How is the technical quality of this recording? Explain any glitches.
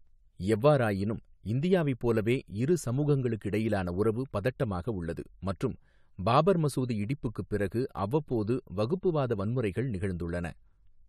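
One fault appears near the end. From 8.30 to 11.07 s there is channel delay (comb filtering). One channel lags the other by about one sample. When the two are summed to mono, shared content cancels at evenly spaced frequencies, the first near 20 kHz. The speech loses some top-end air and sounds slightly dull.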